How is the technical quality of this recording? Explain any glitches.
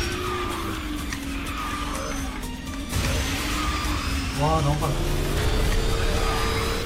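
One glitch mars the recording. At 5.37 s a brief glitch cuts through the audio, caused by damaged data in the compressed stream: corrupted bytes made the decoder misread frames and lose sync before locking onto the next header.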